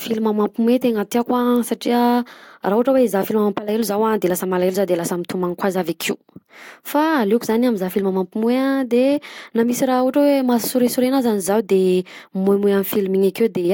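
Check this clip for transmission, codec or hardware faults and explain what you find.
Listening to the speech here, nothing stood out as a transmission, codec or hardware problem.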